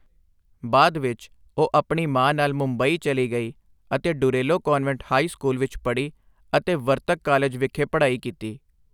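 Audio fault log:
No faults turn up anywhere in the speech recording. There is nothing in it that calls for a timed entry.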